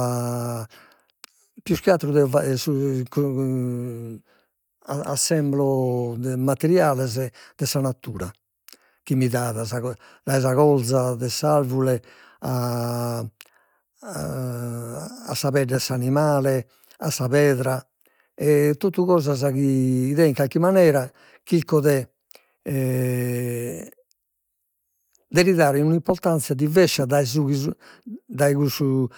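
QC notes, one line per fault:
No faults heard anywhere in this speech clip.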